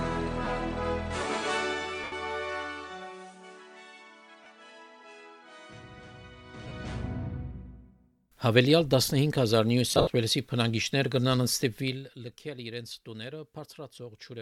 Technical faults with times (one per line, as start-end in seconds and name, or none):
0.45-0.47 lost LE Audio frames
2.04-2.12 lost LE Audio frames
4.44-4.46 lost LE Audio frames
6.68-6.71 lost LE Audio frames
9.91-10.10 lost LE Audio frames